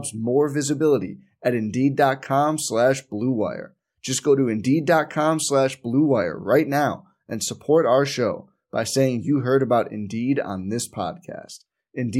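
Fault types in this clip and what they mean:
No fault types can be heard in this speech recording. There is nothing to list here.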